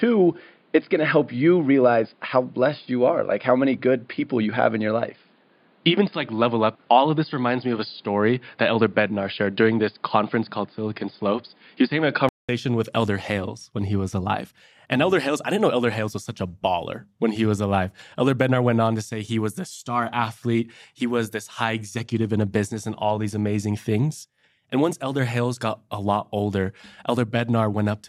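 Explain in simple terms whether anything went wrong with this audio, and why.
Input switched to a poorer device, from the start to 12.49 s: for this stretch the sound is dull and boxy, with nothing above 5 kHz, plus a faint new background hiss, though the loudness stays the same. The likely cause is the recording system picking up a lesser microphone or headset, which can't capture the higher tones. At about 12.49 s there's a brief silence of roughly 200 ms as the input changes back, and the sound clears up.

DAB burbling, at 13.08 s: a very short, watery blip. Digital radio sends sound in small packets with error protection, but weak reception let a few damaged bits slip through. Those errors put short blips of noise into narrow slices of the sound for an instant. The blip is so brief that it fits only a handful of corrupted packets.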